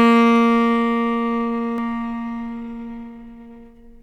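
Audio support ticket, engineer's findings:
Doubled audio track from 1.78 s to end. Full-band second copy trails roughly 0.7 s behind, about 5 dB down, no decay or room colour. Starts abruptly. Likely a second capture path or edit layering two out-of-step copies.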